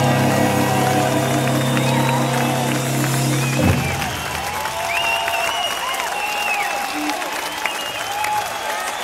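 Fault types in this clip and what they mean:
No technical faults can be heard anywhere in the clip.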